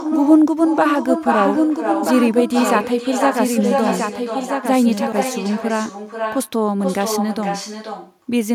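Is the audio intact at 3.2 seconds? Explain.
No. At 3.2 seconds there is an echo with no canceller: the far end's loudspeaker feeds its microphone and nothing removes the return. The speech comes back about half a second later, about 6 dB quieter, sounding thinner than the original.

A doubled audio track also runs from 1.38 to 5.12 s, likely from a second, slower capture path mixing the same audio in again. A dry, full-band copy trails about one and a half seconds behind at about 5 dB down, starting and stopping abruptly.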